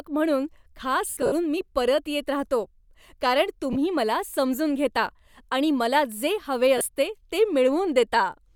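Speech with lost LE Audio frames in three places. The worst stretch runs from 1.08 to 1.32 s, just before "मी परत येत राहतो". About 160 ms drops out in patches spread across 240 ms, with the longest gap around 70 ms. The LC3 decoder fills each gap by replaying the last spectrum with random signs, so the sound there turns into a noisy smear instead of going silent. Two shorter blips of about 30 ms each land at 3.73 s, between "परत येत राहतो कारण" and "मला समजून घेता आणि", and at 6.78 s, right after "आणि मला जे हवे". The light codec compression underneath isn't a fault.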